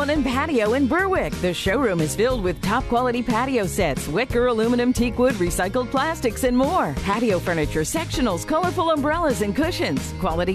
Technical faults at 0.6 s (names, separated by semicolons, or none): none